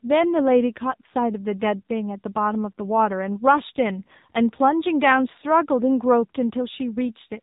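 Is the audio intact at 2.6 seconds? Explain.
No. At 2.6 seconds the speech carries AMR narrowband mobile codec damage, present through the whole clip. The codec samples at 8 kHz, so nothing above 4 kHz survives. It rebuilds the voice from a vocal-tract model excited by a few pulses per 5 ms subframe. Here the damage is plainly audible: the voice sounds muffled, buzzy and synthetic. That fits a low AMR-NB mode near 7.4 kbps.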